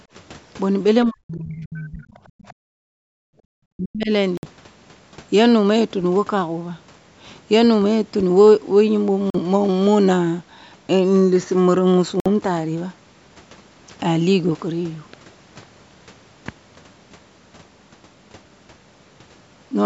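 Speech recording, run through call microphone processing that leaves nothing above 8 kHz, with three kinds of trouble. Early on, the talker gets pushed down hard from 1.05 to 2.03 s, again briefly at 2.25 to 2.31 s, and from 3.75 to 4.11 s. The level sinks by a lot, roughly 40 dB at its deepest, closer to 30 dB in that short middle blip. That's most likely speech suppressed in double talk: with both ends talking at once, the echo canceller couldn't tell its own talker from the loudspeaker echo and clamped down on everything. Sitting right between those, from 2.59 to 3.47 s, the room sound itself drops out by about 40 dB and then comes back. That's the background gated by the echo canceller, which squashed the mic while the far end was playing and let go afterwards. Then there are three short holes at 4.37 to 4.46 s, 9.30 to 9.39 s and 12.20 to 12.26 s, lasting 56, 42 and 56 ms. The audio picks up afterwards as if it had kept running underneath, which is what you'd expect from a Bluetooth dropout. 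Audio packets probably didn't reach the headphones in time, and the gap sizes fit a handful of lost frames each time.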